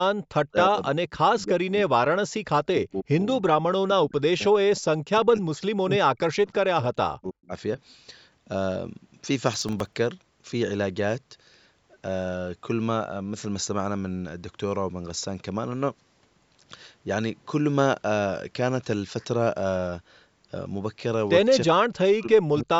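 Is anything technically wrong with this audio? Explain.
Yes, there are three kinds of fault in this speech clip.

From 0.12 to 0.2 s the background is gated by the echo canceller. It clamped the microphone while the far end played, so the room sound drops by about 40 dB for roughly 70 ms, then pops back when it releases.

Speech suppressed in double talk shows up at 0.48–0.78, 1.08–2.49, 2.69–3.17, 3.66–5.62, 5.83–6.5, 6.66–7.52 and 21.67–22.76 s. The talker's level dives by around 40 dB in chunks, likely because the canceller mistook overlapping talk for echo and ducked everything.

From 9.54 to 9.96 s there's processor overload crackle, a gritty tearing as a run of tiny buffers missed their deadline and came out as silence. It points to very short buffers, a millisecond or two each, with about twenty dropped in that stretch.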